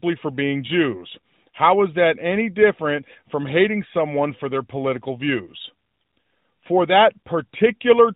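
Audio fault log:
No faults detected.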